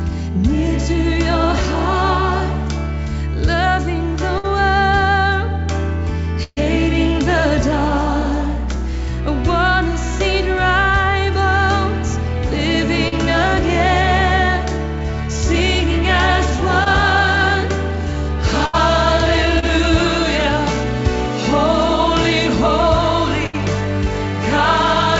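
Four bursts of packet loss hit this call audio, at 4.38, 6.43, 18.66 and 23.46 s. Each time the receiver stretches the last sound into a fading buzz or hiss for 55 to 130 ms, then jumps ahead. The one at 6.43 s even drops briefly to silence before resuming. Shorter concealed packet losses show up at 13.08, 16.84 and 19.59 s as quick smears or wobbles of 20 to 40 ms. The top end stops at 8 kHz, which fits a G.722 call path running at 64 kbps.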